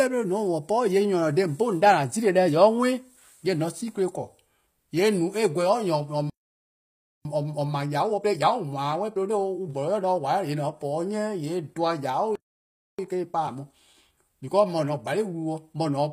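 Throughout the speech, the treble sounds synthetic: s sounds are gritty and lispy, and nothing reaches above 15.4 kHz. This is likely HE-AAC compression, with spectral band replication pointing to a low bitrate around 24 kbps. Unlike a plain low-pass, the top is still bright, just not genuine. From 6.30 to 7.25 s the sound halts for about 0.95 s, a playback stall, likely from the player running out of data. A time-compressed catch-up follows from 7.25 to 10.25 s, running 1.15 times fast at normal pitch, which sets it apart from a speed change that raises pitch. A second playback stall silences the audio from 12.35 to 12.99 s, about 0.63 s. Another catch-up then runs from 12.99 to 15.99 s at 1.1 times speed, hurried but unchanged in pitch.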